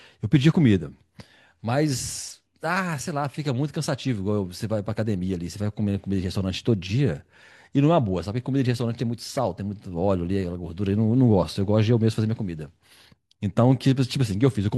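No technical faults are audible.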